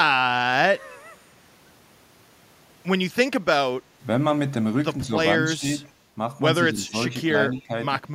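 At 5.06, 5.44, 5.84, 6.73 and 7.53 s the speech dips by roughly 5 to 10 dB. This is likely speech suppressed in double talk: the canceller ducks the talker, turning it down without full silence. At 7.56 s a faint echo leak follows 195 ms behind, about 35 dB down. It is likely uncancelled loudspeaker pickup, heard as a distinct delayed copy rather than reverberant smear.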